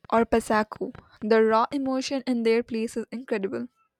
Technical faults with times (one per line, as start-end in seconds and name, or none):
0.05-1.87 train of clicks